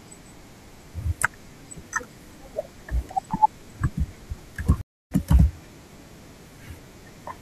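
A stream reconnect hits at 4.81 s: the speech drops into about 290 ms of silence while the connection breaks and a new decoder starts mid-stream. At 5.12 s it resumes roughly 150 ms further on, so a short stretch of speech is skipped.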